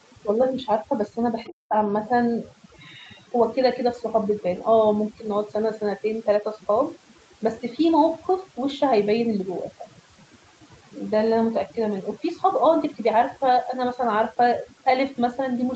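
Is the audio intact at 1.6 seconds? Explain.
No. At 1.6 s the sound falls inside a stretch of speech suppressed in double talk, running from about 1.47 to 1.74 s. The level drops sharply, by around 20 dB at its deepest, and parts of the sound thin out or vanish in pieces, adding up to roughly 150 ms of loss. This is likely the echo canceller failing to tell the near talker from loudspeaker echo while both sides were active, and attenuating everything together.

Overdone noise removal also runs throughout the clip, including this moment. The noise reducer pushes individual frequency bands down hard whenever they sit close to its noise estimate, so low-level parts of the speech are stripped along with the background. What remains between and around the speech is a lowered background broken up into small twinkling artefacts.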